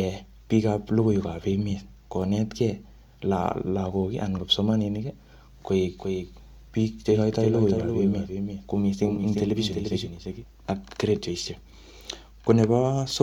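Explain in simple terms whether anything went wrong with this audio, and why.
From 5.98 to 10.44 seconds the speech is heard twice, a second, somewhat quieter copy trailing about 0.4 seconds behind and cutting in and out abruptly. This doubled audio track likely comes from the sound being recorded again through a slower path.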